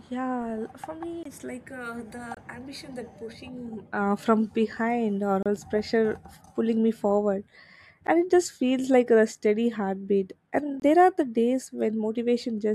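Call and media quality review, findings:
Block of digital silence in speech, five dropouts: 1.23–1.25 s, 2.35–2.37 s, 5.43–5.46 s (about 30 ms), 8.07 s (about 12 ms), 10.80–10.82 s. Hard cuts to silence, heard as short ticks and holes. Probable component: audio output callback missing its deadline, leaving blocks unfilled. The 23 ms gaps fit a 1024-sample buffer, the 12 ms gap a 512-sample one.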